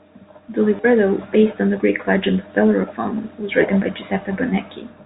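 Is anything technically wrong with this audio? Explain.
Yes. At about 0.77 s, just before "based on the", there is a brief packet loss with the last packet repeated. About 20 ms of audio went missing, which fits two lost 10 ms packets, and the receiver filled the gap by replaying the last packet it had. The moment sounds like a tiny robotic stutter. On a waveform, a short block repeats. On a spectrogram, the repeated stretch sits beneath the G.711 telephone band's 4 kHz ceiling.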